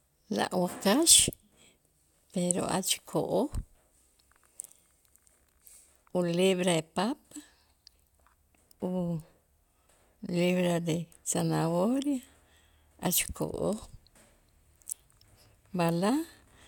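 Speech recording with no technical faults to report.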